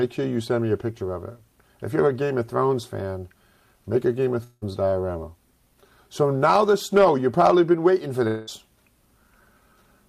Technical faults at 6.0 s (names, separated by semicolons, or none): none